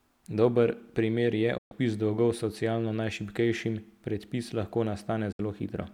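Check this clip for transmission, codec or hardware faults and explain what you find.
Two digital broadcast dropouts, at 1.58 to 1.72 s and 5.32 to 5.40 s. The receiver stopped getting valid frames and muted until clean data returned. The speech fades out over about 8 ms into silence and resumes later, skipping roughly 128 ms and 64 ms of programme.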